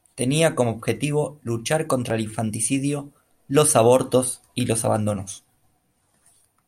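From 0.97 s to 6.62 s, a click or pop recurs roughly every 1.13 s, around seven in all, cutting briefly into the speech. These are likely clock drift buffer slips: two clocks disagreeing by about a tenth of a percent, so a block of about fifty samples is periodically dropped or repeated.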